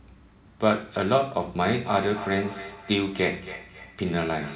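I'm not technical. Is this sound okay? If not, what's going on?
No. From about 1.85 s to the end, the speech repeats roughly every third of a second, each copy thinner and more ringing. This is feedback echo between two devices: one device plays the call aloud and the other's microphone picks it up again.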